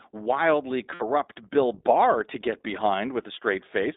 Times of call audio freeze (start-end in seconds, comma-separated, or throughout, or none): none